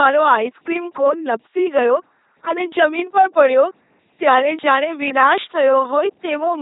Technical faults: LPC-10 vocoder

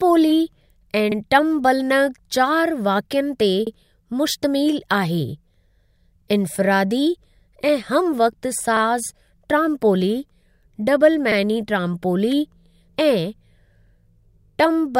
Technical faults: overlapping chunks

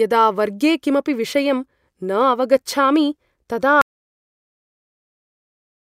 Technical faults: audio dropout to silence

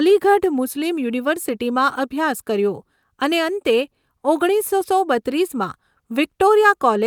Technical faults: none

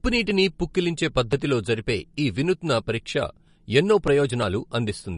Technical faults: MP3 compression

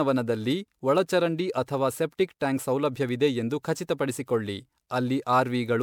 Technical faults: generation loss

